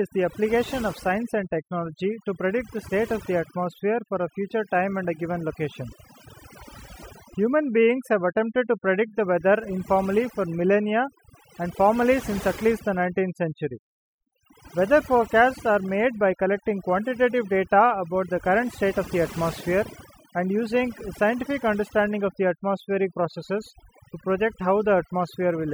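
A speech recording with overdone noise removal running throughout: the pauses collapse into near silence flecked with twinkling specks. An overly aggressive noise reducer is gating individual frequency bands, dragging quieter speech detail down with the noise.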